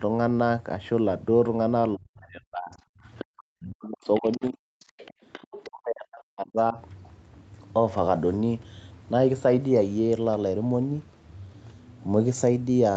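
From 1.96 to 2.75 s, 2.91 to 3.0 s, 3.36 to 4.6 s, 4.92 to 5.16 s and 5.65 to 6.78 s, the speech is suppressed in double talk. The speech dips by up to roughly 40 dB or breaks into pieces, likely because the echo canceller mistook it for loudspeaker echo. The waveform shows sudden collapsed stretches, and the spectrogram shows the harmonics fading to near-empty bands.

At 3.18 to 3.25 s, 4.14 to 4.38 s and 4.79 to 5.7 s, the other side's voice leaks through, about 15 to 25 dB below the speech. It is likely residual echo the canceller missed. On the spectrogram it appears as faint, separate harmonic traces, some inside the suppressed gaps. It stays within the call's 8 kHz band.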